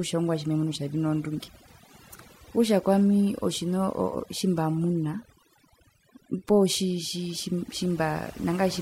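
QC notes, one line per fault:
Throughout: overdone noise removal. The noise reduction is set too strong, so frequency bands near its noise estimate drop out with the quieter parts of the speech. Gaps go near-silent with twinkling specks. A spectrogram shows blank background scattered with isolated bright dots, and ragged, holed harmonics.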